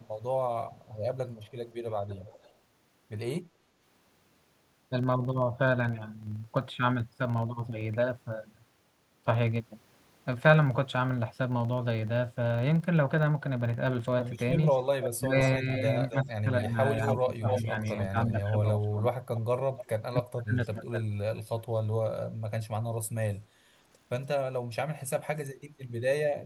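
Speech runs over a steady low buzz at 23.4 Hz that tracks the speech level, a filter restarted on every block, which fits a 2048-sample block starting from silence each time. A delayed copy of the voice, about 0.29 to 0.32 s late and ranging from faint to nearly as loud as the speech, appears at 0.84–1.53 s, 2.18–2.52 s, 14.7–15.47 s, 16.09–18.05 s and 19.36–19.86 s. This is echo leak, likely from a loudspeaker echo the far end's canceller left in. The voice also dips by about 20 dB in patches across 15.16–19.15 s and drops by up to about 40 dB across 19.93–21.07 s. That is speech suppressed in double talk, likely the canceller turning everything down while both sides spoke.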